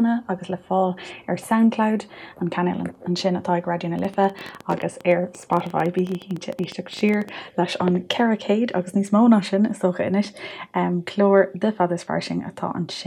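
From 3.99 to 7.30 s a train of clicks ticks and pops over the sound at about 12.7 per second, unevenly spaced, some forty in all, peaking a little above the level of the audio. The likely cause is interference from nearby equipment or a faulty connection or power supply.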